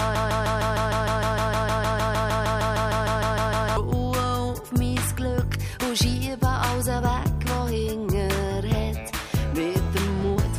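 From the start to 3.77 s, a broken-record loop repeats a 154 ms fragment about two dozen times, likely from a stalled player or stream, losing the intervening audio.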